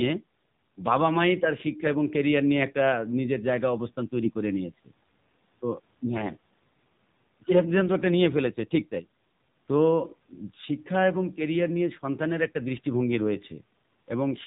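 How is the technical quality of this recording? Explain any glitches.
The recording is speech with clearly limited technical quality. It passed through a narrowband mobile codec throughout, and one brief corruption burst occurs just past four seconds.

The AMR narrowband mobile codec affects the whole clip. Everything above 4 kHz is missing, so the voice sounds thin and telephone-like. The codec rebuilds speech from a vocal-tract model excited by a handful of pulses per 5 ms subframe. At this low quality, which fits a mode around 7.4 kbps, the result is plainly buzzy and synthetic. A spectrogram shows a hard ceiling at 4 kHz with smeared, grainy harmonics below it.

AMR bit errors appear from 4.25 to 4.31 s, about 60 ms, which fits roughly three 20 ms frames. The less protected bits in those frames were flipped, at a rate of a few percent, while the checks on the core bits still passed. 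The excitation pulses therefore landed in the wrong places and the fine gain and spectral values went off. Pitch and loudness stay roughly intact, but the sound turns briefly hoarse and gargly. On a spectrogram the harmonic striations roughen with scattered, noisy energy for that short stretch. The waveform keeps a similar envelope and roughly regular pitch periods.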